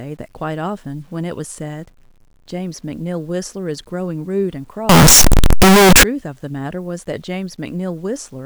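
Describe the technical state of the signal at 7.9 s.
At 7.9 s the speech signal is intact, with no fault present at that moment.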